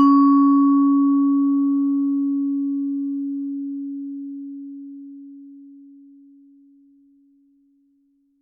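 No technical faults can be heard at any point in this sound.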